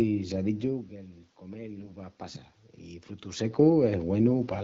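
From 1.80 to 1.92 s the speech briefly turns hoarse and scratchy, with a gargling roughness, while its pitch and loudness stay roughly in place. These are AMR bit errors: the less protected bits of the AMR-WB frames arrived flipped at a rate of several percent, yet the check on the important bits still passed. The excitation pulses were decoded in the wrong positions and the fine pitch, gain and spectral values were off. A burst this short points to about four damaged 20 ms frames.

From 3.22 to 4.58 s the voice and the room noise swell together, rising by about 4 dB over more than a second. This is automatic gain rising. Just before it, around 3.0 s, the talker moved away and the level at the microphone fell by about 14 dB. The gain control read the input as too quiet and raised its gain gradually, so the background climbs along with the speech instead of staying steady.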